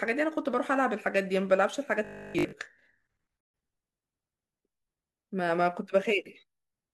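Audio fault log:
2.05 to 2.53 s, robotic sound from repeated short buffers: for about half a second the speech collapses into a rigid, metallic buzz pitched at 50 Hz that still loosely tracks the syllables. The likely cause is audio arriving too slowly, so playback kept looping the most recent fragment while most of the real signal in that stretch was dropped. A 50 Hz buzz matches a repeat every 20 ms, which fits a buffer of about that length.
3.41 to 3.54 s, gap at a join of encoded pieces: a 133 ms hole of silence cuts into continuous speech, with edges smeared by the codec, and the sound then resumes exactly where it left off. This points to two separately encoded segments spliced without trimming. The encoder's start-up delay at the head of one piece and the padded final frame of the other both remained in the joined file, producing the dead air.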